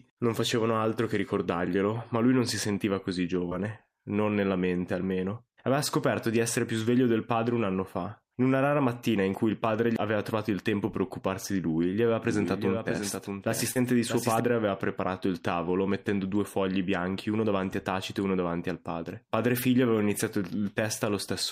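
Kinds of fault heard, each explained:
short concealed packet loss: brief smears near 3.49 s and 13.71 s, where roughly 20 and 40 ms went missing and the decoder extended the preceding sound.
doubled audio track: from 12.24 to 14.40 s a dry copy trails roughly 0.7 s late, about 5 dB quieter, likely from a second, slower capture path.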